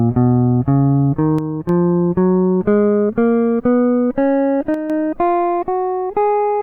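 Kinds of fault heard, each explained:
One channel drops out: one side of the stereo feed likely cut out briefly, leaving the mono sum with half its signal, so the music falls abruptly by about 6 dB from 1.39 to 1.69 s and again from 4.74 to 4.90 s.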